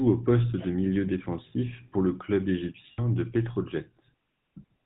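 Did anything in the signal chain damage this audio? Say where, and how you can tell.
Yes. Throughout, the speech sounds buzzy and gravelly, with nothing above 4 kHz. That is the GSM full-rate codec at the coding stage, consistent with a 13 kbps coder.

At 2.92 to 3.00 s, just after "défensif pour le club", the sound holds as a rough metallic ring. These are lost GSM frames on the network path, concealed by repeating the last good frame, consistent with about 60 ms missing.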